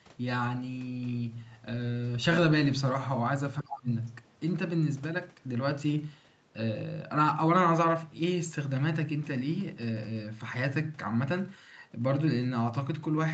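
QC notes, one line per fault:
3.60–3.89 s, speech suppressed in double talk: the speech drops by up to about 25 dB for roughly 300 ms, likely because the echo canceller confused overlapping near-end talk with the loudspeaker echo and attenuated both. The waveform shows a sudden narrow trough; the spectrogram shows a faded vertical strip.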